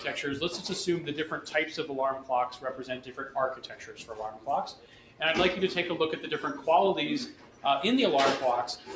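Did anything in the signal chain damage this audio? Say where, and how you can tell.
Yes. The damage happens at the call processing stage, where the noise suppressor applied to music or sounds was left active on material it was not built for. Across the whole clip the level swings by around 10 dB as the suppressor judges steady content and decaying tails to be noise and pulls them down, while attacks pass. The result is audible pumping and a thinned sustain. The 8 kHz top-end limit from the same call chain is normal.

The sound cut by the noise suppressor is clearest in five spots: 2.57–3.2 s, 3.56–4.15 s, 4.32–4.47 s, 4.72–5.2 s and 7.32–7.64 s. In each one, sustained or fading material sinks by up to about 9 dB for about 150 to 500 milliseconds, and decays end early instead of ringing out.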